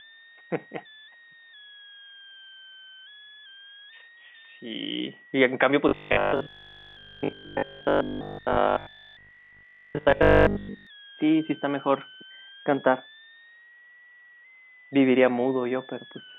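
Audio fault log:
throughout: switching supply whistle. A thin, high whistle sits under the speech the whole time, about 25 dB below it. Its pitch hovers around 1.5 kHz but wanders and steps between 1.48 and 2.06 kHz as the load on a switching power supply changes. The whistle lies inside the telephone band the G.711 line passes, so nothing filters it away.
5.89 to 10.87 s: robotic sound from repeated short buffers. The speech turns into a hard, metallic buzz pitched at 50 Hz that still tracks the rough shape of the phrases. The likely cause is fresh audio arriving too seldom, so the software fills each gap by replaying the last 20 ms, which fits a 20 ms buffer and sets the buzz at 50 Hz. Most of the real audio in this stretch is skipped.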